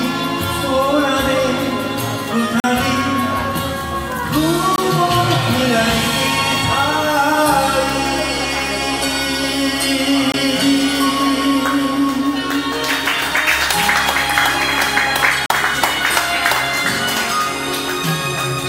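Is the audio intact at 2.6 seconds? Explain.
No. At 2.60 seconds the audio drops into a block of digital silence lasting 40 ms, returning at 2.64 seconds. For that span the sound cuts out to silence, most likely because the output buffer was not filled in time. The signal switches off and back on with no fade, and at this length the result is heard as a short hole rather than a single tick or pop.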